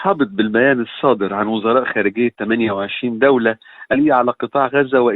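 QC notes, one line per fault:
3.93–3.97 s, stream segment skipped: the sound jumps abruptly forward, with a short blip of about 40 ms at the join. The likely cause is one segment of the segmented stream failing to load, so the player carried on from the next segment and skipped that stretch of the programme.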